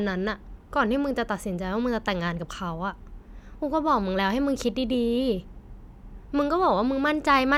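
No technical faults can be heard anywhere in the speech recording, and the signal holds steady throughout.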